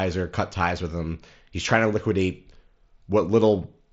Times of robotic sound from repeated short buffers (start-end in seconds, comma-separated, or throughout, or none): none